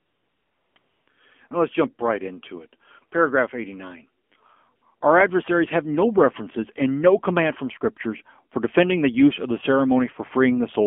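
From start to finish the speech passes through the AMR narrowband mobile codec. The band is held between about 200 Hz and 3.4 kHz, and the voice has a plainly buzzy, synthetic edge, which fits a low mode near 7.4 kbps. A simple telephone band-limit would only muffle the sound. This added coarseness comes from the vocal-tract model being rebuilt from too few bits.

AMR comfort noise fills the opening from 0.00 to 0.76 s and again from 0.78 to 1.08 s. It returns briefly from 4.24 to 4.32 s and from 4.76 to 4.82 s. In these gaps the phone stopped sending speech frames, and the receiver substituted smooth, even noise shaped from a rough sketch of the background. A dropout would leave silence and a noise gate would leave nothing, but here a steady hiss switches in and out in place of the real ambience.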